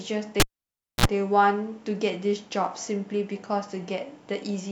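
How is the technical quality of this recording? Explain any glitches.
There's one clear glitch. From 0.40 to 1.06 s, a cable pulled and plugged in gives a pop, about 0.61 s of near silence, then roughly 52 ms of 60 Hz mains buzz before another pop.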